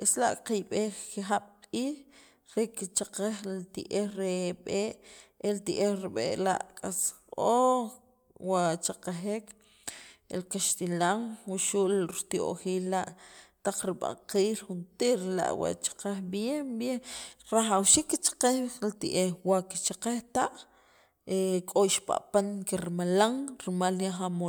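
Speech recording with no audible technical faults.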